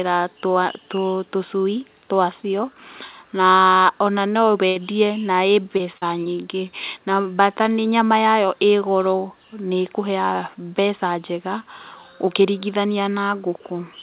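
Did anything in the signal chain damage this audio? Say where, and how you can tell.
Yes, at the network stage. A burst of packet loss runs from 4.68 to 4.77 s, between "na ona" and "na ĩ". For about 74 ms the receiver extends the last sound and fades it down, so it turns into a held, decaying tone or hiss rather than new material. The audio then picks up roughly 80 ms further on, so the stretch in between is simply gone.

Three short concealed packet losses follow after "na ĩ", at 5.77 to 5.81 s, 5.97 to 6.04 s and 6.24 to 6.28 s, each with 20 to 40 ms missing. Each gap is bridged with about 20 to 42 ms of synthesised continuation that is cross-faded back into the real signal. On playback they come across as brief smears or wobbles, and a short consonant can disappear. The whole clip is band-limited at 4 kHz, which fits a G.711 mu-law path at 64 kbps.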